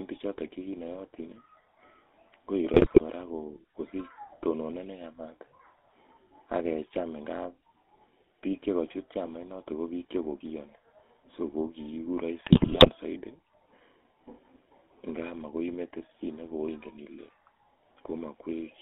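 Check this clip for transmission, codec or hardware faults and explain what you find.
Two faults are present: the whole recording has passed through the GSM full-rate codec, and two short stretches carry GSM bit errors on top of it.

The GSM full-rate codec coloring runs throughout the speech. The codec rebuilds the voice from a vocal-tract filter driven by a sparse, regularly spaced pulse excitation, so fine detail between pulses is lost and the result takes on a buzzy, gravelly edge that is plainly audible. The band is limited to about 250 Hz to 3.5 kHz, which fits the 13 kbit/s GSM full-rate scheme. Plain band-limiting would only sound muffled, and ordinary low-bitrate MP3 smears with swirly highs. The roughness riding on every voiced sound is what marks this codec.

GSM bit errors break in at 2.74 to 3.03 s and again, more heavily, at 12.44 to 12.90 s. Corrupted bits reach the decoder, so filter, pitch or gain values are wrong for a run of frames. 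The spectrum twists and the level jumps, and the speech turns to squawks, pops and gargling. Packet loss would instead leave gaps or smooth concealment, and clipping would flatten peaks without this wild, frame-by-frame distortion.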